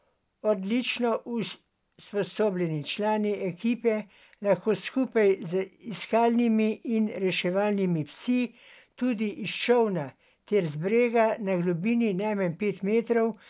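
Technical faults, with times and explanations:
No technical faults are audible in this speech recording.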